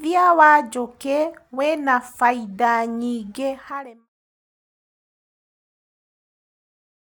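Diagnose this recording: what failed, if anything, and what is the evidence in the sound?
Nothing in this speech recording points to a failure at any stage of the chain. The level fades out smoothly from around 3.5 s to 4.1 s, without a click or hard edge, as an editor's fade would.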